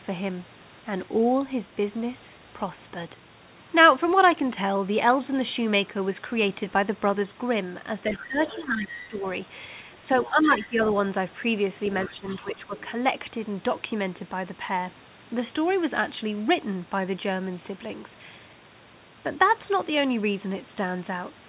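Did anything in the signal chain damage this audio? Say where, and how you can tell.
Yes. The call processing stage shows speech suppressed in double talk. The talker dips by about 10 dB at 8.08 to 9.23 s, 10.02 to 10.78 s and 12.09 to 12.71 s. The likely cause is an echo canceller turning everything down while both sides spoke.

The same stage lets the other side's voice leak through. A second voice sits underneath at 8.12 to 9.17 s, 9.94 to 10.29 s and 11.85 to 12.8 s, about 15 to 20 dB below the talker. This is likely loudspeaker echo the canceller failed to remove. The band stops near 4 kHz, which fits a G.711 call codec.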